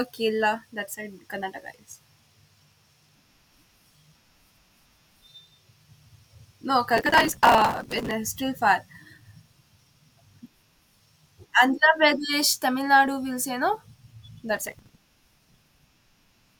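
At 6.97 to 8.11 s, and again at 14.57 to 15.79 s, the speech breaks into processor overload crackle. The system keeps missing its deadlines for short buffers of roughly 5 ms and skips them, so roughly 200 and then about 100 hard-edged gaps pile up into a gritty tearing burst.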